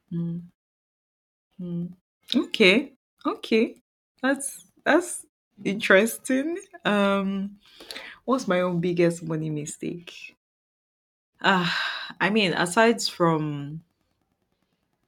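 No technical faults can be heard in this speech clip. In the longer pauses the output fades to silence and the background drops away, then returns in time for the next sound, with only very quiet sound lost.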